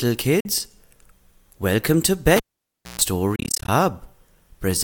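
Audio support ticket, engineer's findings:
Short hole in the audio at 0.40–0.46 s, about 43.5 ms gone, sound resumes further on as if it kept playing. Likely Bluetooth dropout: a few packets, around three, missed the headphones' deadline.

Pop at 2.37 s, near silence, then a 138 ms burst of 60 Hz mains buzz, second pop as sound returns at 3.01 s. Cable pulled and plugged in: jack out about 594 ms, buzz while only tip touched.

Stuttering gaps from 3.36 to 3.69 s, about 174 ms lost across 319 ms, longest hole 29 ms, audio skips ahead each time. Bluetooth dropout again, likely roughly a dozen late packets discarded.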